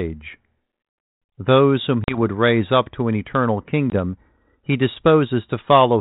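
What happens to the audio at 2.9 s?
Nothing goes wrong at 2.9 s: the speech there is intact, carried through the same G.726 ADPCM telephone coding at 32 kbit/s as the rest of the clip, with no dropout, click or other break at that moment.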